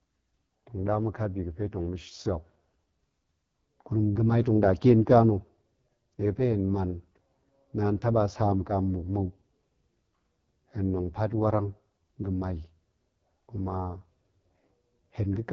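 AMR wideband (HD Voice) codec damage runs through the whole speech clip, heavy enough to point to the lowest 6.6 kbit/s mode. With so few bits for its vocal tract model, the codec makes speech raspy and rough, and nothing remains above 7.5 kHz.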